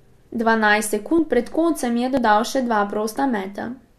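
Overlap between stream segments at 1.19, 2.17 and 3.15 s: overlapping segment timestamps make the player drop a few milliseconds of speech, so the waveform jumps in a tiny skip roughly every second.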